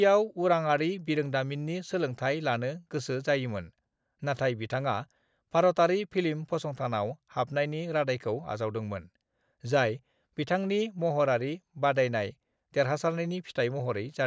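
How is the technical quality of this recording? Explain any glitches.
No technical faults can be heard in this recording. There are no glitches to explain.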